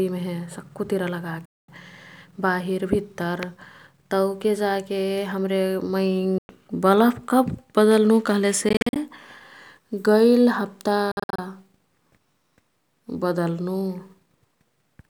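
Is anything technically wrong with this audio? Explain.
Yes. The speech cuts abruptly to silence four times, and each time it resumes further along, as if it had kept playing underneath the gap. At 1.45 s about 0.23 s is lost, and at 6.38 s about 0.11 s. At 8.69 s, right after "कब् बदल्नु", about 0.16 s drops out as short bursts of up to 40 ms spread over 0.27 s. At 11.12 s about 0.19 s vanishes in bursts of up to 53 ms across 0.27 s. This is likely a Bluetooth dropout: audio packets reached the headphones too late and were discarded, so the output went silent until valid packets arrived. The missing stretch is skipped rather than delayed.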